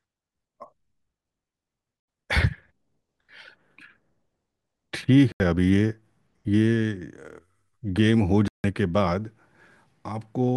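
At 2.00 s and 5.32 s the speech drops into an 80 ms block of digital silence, and at 8.48 s into one of 160 ms, double that length. These are abrupt cuts, not fades or noise-filled dropouts, which fits unfilled output buffers.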